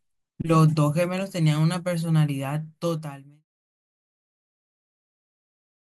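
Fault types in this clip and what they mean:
Nothing stood out on listening to this speech, and the level eases away smoothly near the end, as an editor would fade it.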